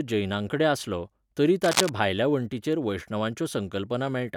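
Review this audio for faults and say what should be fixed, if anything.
Cable scratch noise runs from 1.64 to 1.89 s, between "जैनांकडेन आसलो तरी" and "भायल्या वण्टींचेर". It is a quarter-second burst of dense, irregular crackle and rustle, roughly as loud as the speech beneath it. The likely cause is a worn cable, connector or control being moved, so that its contact resistance jumps around rapidly and injects noise into the signal path. To prevent it, replace or reseat the suspect cable and connectors and secure them so they cannot shift during recording.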